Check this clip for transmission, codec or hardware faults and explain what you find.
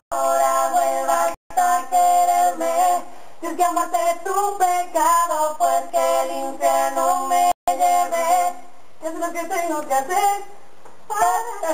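There's one fault, a single click at 8.44 s, and it sounds like dropped samples. The waveform jumps abruptly from one value to a later one, most likely because a couple of samples went missing from the stream. That's a tiny fraction of a millisecond, nowhere near enough to lose any actual sound. You hear just one sharp tick, and a spectrogram would show it as a thin vertical line at that spot.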